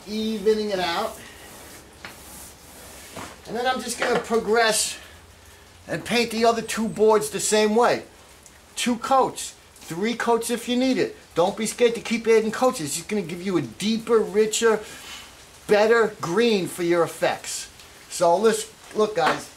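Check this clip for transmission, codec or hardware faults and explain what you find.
No transmission, hardware or codec-related fault stands out anywhere in the signal, which holds steady and continuous throughout.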